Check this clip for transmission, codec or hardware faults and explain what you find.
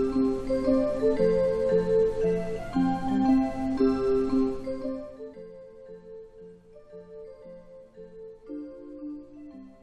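One fault: zipper noise from 4.41 to 5.46 s. A gain change of roughly 20 dB downward is applied in unsmoothed steps, around a hundred per second, instead of as a continuous ramp. Each step leaves a tiny click, so a fine zipping texture rides on the sound throughout the fade.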